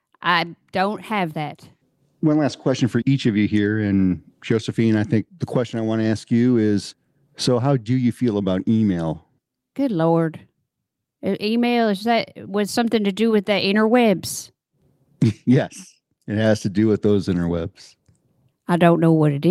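Nothing in this speech recording stood out as a technical problem on listening.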